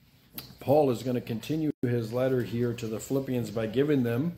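At 1.71 s the sound breaks off until 1.83 s, a gap of about 128 ms, and this is a gap at a join of encoded pieces, a pattern that repeats every 4.0 s. Each separately encoded piece keeps its encoder's leading delay and padded final frame, so silence sits at the seam. Unlike a dropout, nothing is lost: the sound resumes exactly where it left off, and both edges are softened by the codec rather than clicking.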